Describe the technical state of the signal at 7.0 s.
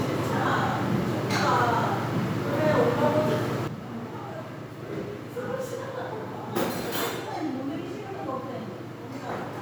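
A sudden gain jump, likely a digital gain step applied without a ramp, took effect at 3.68 s, so at 7.0 s the sound and background sit about 10 dB lower through to the end.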